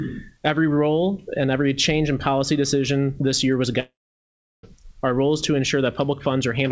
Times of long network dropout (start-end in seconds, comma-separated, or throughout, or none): 3.80-4.65